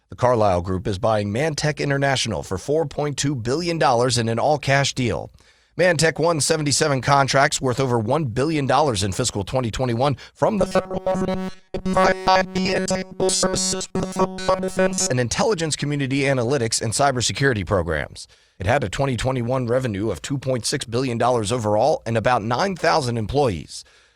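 Speech, with robotic sound from repeated short buffers from 10.59 to 15.11 s: the whole stretch becomes a rigid 188 Hz metallic buzz, likely from one block of about 5.3 ms being replayed while new audio is skipped. A spectrogram shows flat harmonic lines at multiples of 188 Hz, and the waveform shows one short cycle repeating identically.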